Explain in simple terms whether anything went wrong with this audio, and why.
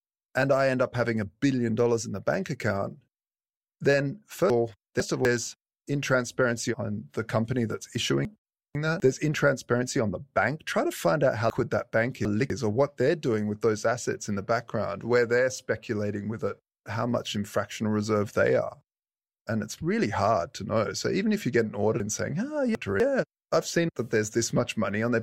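Speech jumps and jumbles briefly at 4.5 to 5.25, 8.25 to 9.0, 11.5 to 12.5 and 22.0 to 23.0 seconds. These are chunks out of order: a quarter-second piece arrived late and played two or three pieces after where it belonged.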